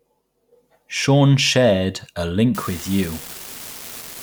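From 2.55 s, just after "shared a", an unreliable data bit sets in and lasts to the end at 4.23 s. One line of the digital sample word is marginal, so its bit flips in a random share of samples, and each error adds a spike of the same size, about -20 dBFS. It sounds like a steady crackle or fizz that carries on through pauses in the speech. A waveform shows identical-height needles scattered throughout, and a spectrogram shows broadband speckle filling the full frequency range.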